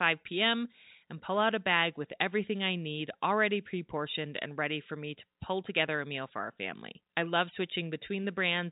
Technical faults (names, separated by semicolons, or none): none